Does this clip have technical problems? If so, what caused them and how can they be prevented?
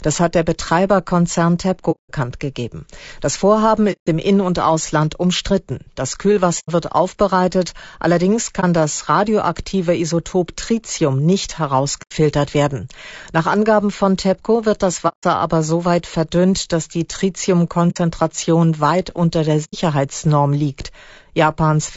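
Yes. The speech throughout sounds rough and grainy. Noise fills the gaps between harmonics, and the top band sounds thin and synthetic. This is plainly audible low-delay AAC compression, likely AAC-ELD as used in video calls. Its short frames resolve pitch harmonics poorly and spend more bits. The damage fits a low bitrate of around 32 kbps. Encoding at a higher bitrate, or with a codec that uses longer frames, would prevent it.

AAC frame loss with muting causes eight dropouts. They occur at 1.91 s (180 ms), 3.92 s (150 ms), 6.59 s (90 ms, just before "wird aufbereitet allerdings"), 8.60 s (30 ms, between "wird aufbereitet allerdings" and "das radioaktive"), 12.02 s (90 ms), 15.08 s (150 ms), 17.90 s (60 ms) and 19.64 s (90 ms, after "weit unter der"). In each case the decoder zeroed the missing frames, and the overlapping windows faded the sound out and back in. A more reliable network path with packet-loss concealment would prevent it.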